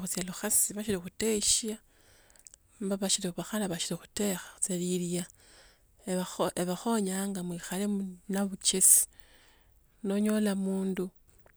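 No technical faults can be heard in this recording.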